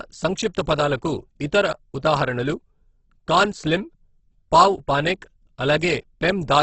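Speech whose whole length sounds rough and grainy, with voiced sounds turned noisy and nothing above about 8.2 kHz. This is likely heavy Opus compression in its music mode, refilling starved bands with folded or noise content at a very low rate, which fits roughly 12 kbps.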